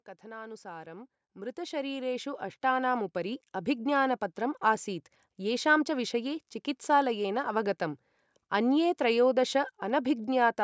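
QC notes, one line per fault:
0.21 to 5.14 s, automatic gain rising: the automatic gain control judged the incoming level too low and kept turning its gain up across these five seconds, by about 15 dB in all. Because the boost is applied to the whole signal, the speech and the background noise swell together, a slow climb in loudness rather than a jump, with the room sound creeping forward alongside the speech while the call's microphone processing trims the band above 8 kHz.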